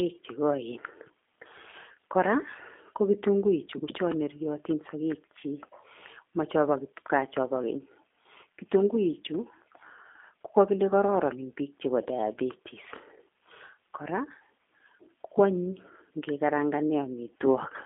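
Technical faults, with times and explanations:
Throughout, G.729 codec: speech is rebuilt from a vocal tract filter and a few pulses per frame, sounding rough and synthetic, with nothing above 3.7 kHz, which fits 8 kbit/s.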